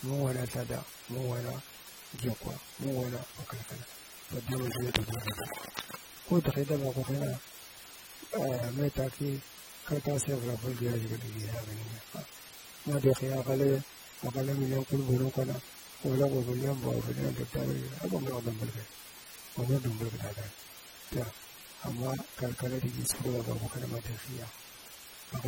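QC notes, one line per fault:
Throughout: low bit depth with dither. The audio is carried on what sounds like only 7 bits, with dither added before rounding, so the rounding error turns into a steady, even hiss rather than gritty distortion. That hiss sits only about 15 dB below the speech and stays constant through pauses. On a spectrogram it appears as a uniform grey wash across all frequencies. On the waveform, silences never drop to a flat line and show a thick, fuzzy band.
Throughout: AAC compression. The codec damage is plainly audible: the speech sounds dull and smeared, with a warbling, fizzy texture on sustained sounds and sibilants. This is likely lossy AAC-LC coding, which fits a low bitrate of around 32 kbps. Its hearing-model quantisation discards detail it judges less audible. A spectrogram shows a hard ceiling with nothing above 16.6 kHz, and patchy, blocky energy in the upper bands.
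4.52–5.97 s: cable scratch noise. For about 1.5 seconds, dense, uneven bursts of scratching and rustling ride over the speech, nearly as loud as the speech itself at roughly 5 dB below it. The likely cause is a worn cable, connector or control being moved, so that its contact resistance jumps rapidly. A spectrogram shows ragged broadband vertical streaks across this span, and the waveform shows spiky, irregular bursts added on top.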